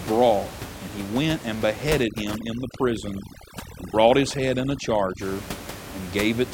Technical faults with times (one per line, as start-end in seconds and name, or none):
2.04-5.21 overdone noise removal